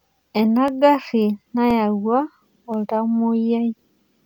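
Periodic USB or driver dropouts run through the speech from 0.68 s to 3.76 s, recurring every 1.024 s. Each time, something blocks the USB bus or audio driver, and roughly a millisecond of signal is replaced by silence, heard as an evenly spaced tick.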